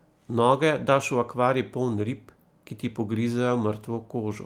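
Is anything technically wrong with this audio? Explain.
Yes, there is one brief flaw. At 1.91–1.93 s, a lost packet rebuilt from error correction: a low-bitrate copy replaces the missing audio, consistent with one 20 ms packet, so the speech briefly turns rougher and noisier without the gap or smeared repetition that plain concealment would produce.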